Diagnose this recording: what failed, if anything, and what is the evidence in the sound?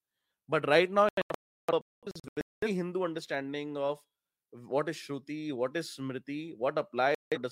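The failure is in digital reception: a digital broadcast dropout. Just after "right now", from 1.09 to 2.68 s, the speech breaks into several silent holes totalling about 1.1 s, the longest about 0.34 s. A second short mute runs from 7.15 to 7.38 s. The receiver muted frames that were lost or arrived corrupt, and the spacing fits whole frames of roughly 43 ms. Unlike packet-loss concealment, the gaps are clean silence rather than smeared fill, and there is no crackle to suggest a wiring fault.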